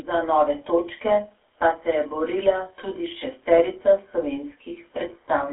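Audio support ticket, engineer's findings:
GSM full-rate codec, throughout: buzzy, gravelly roughness on speech, nothing above 3.8 kHz. Grit, not just 300 Hz–3.4 kHz band-limiting, points to 13 kbps pulse-excited coding.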